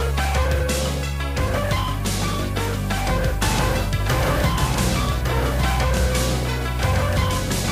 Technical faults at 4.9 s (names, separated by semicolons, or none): doubled audio track